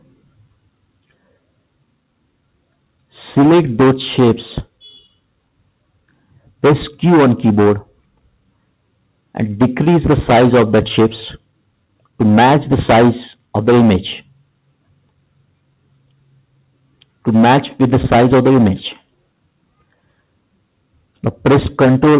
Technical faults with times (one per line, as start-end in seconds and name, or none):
0.01-1.38 sound cut by the noise suppressor
5.02-6.63 sound cut by the noise suppressor
7.84-9.36 sound cut by the noise suppressor
11.40-12.20 sound cut by the noise suppressor
14.21-17.26 sound cut by the noise suppressor
18.98-21.44 sound cut by the noise suppressor